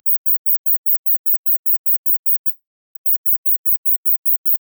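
The audio breaks off at 2.49 s and does not return properly until 2.97 s. For the first moments, the last sound is stretched into a buzzy tail that fades away. Then about 0.32 s of near silence follows. When the sound resumes, roughly 0.46 s of material is simply gone, with no catching up. This is a long network dropout. The likely cause is a stretch of lost packets, with the receiver's concealment filling the gap until it gave up.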